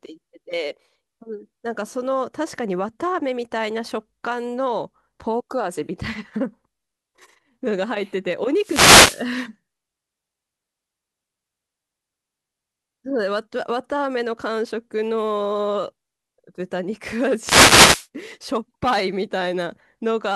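Speech with two wireless microphone noise hits. At 8.57 to 9.29 s and again at 17.38 to 18.08 s, a brief swish of static is heard. The analogue FM radio link fades as reflected signals cancel. Receiver noise then rises through the audio.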